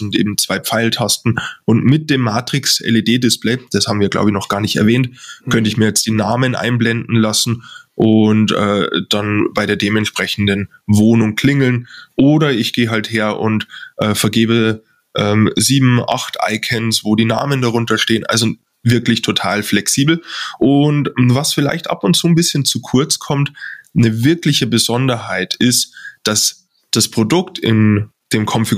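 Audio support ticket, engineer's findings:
Gain pumping, whole clip. Level swing around 20 dB. Speech squashed, loud and quiet passages closer in level. Likely cause: input gain set far too high, with a fast limiter or compressor clamping each peak and releasing into the gaps. Check preamp gain staging first, then limiter attack and release settings.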